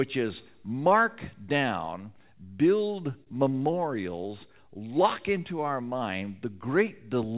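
At 3.24 s the sound hangs briefly, until about 3.30 s. This is a short stall from a late packet. The next packet had not arrived when it was due, and the jitter buffer ran dry. The receiver filled about 28 ms by stretching the last sound, then carried on from where it stopped. Nothing is lost, but playback now runs 28 ms later. It is heard as a held smear with a slight buzz or dip, below the 4 kHz ceiling of the G.711 call path.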